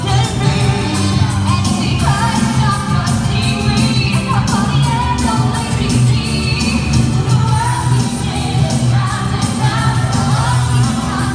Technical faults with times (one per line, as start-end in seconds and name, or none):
none